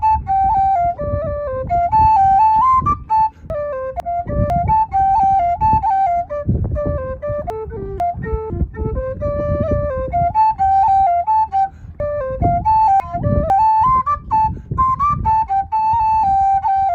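At 3.5 to 4.5 s and again at 7.5 to 8.5 s, chunks out of order: a 500 ms block arrives one slot late, so two neighbouring blocks swap and the sound jumps ahead, then back, with a hard join at each seam. From 12.0 to 13.5 s a block lands two slots late, scrambling 1.5 s. On a spectrogram, vertical seams mark abrupt discontinuities at the joins. The waveform shows step jumps there.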